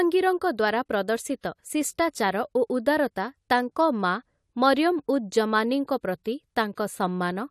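A transform codec is spreading its quantisation noise across whole blocks, and twice in this speech a sharp attack lands late in a block, so noise sized for the loud onset spills into the quiet just ahead of it. The result is pre-echo: at 5.87 s a brief hiss of about 13 ms smears in before the attack, and from 6.75 to 6.77 s a longer smear of about 22 ms softens the next onset.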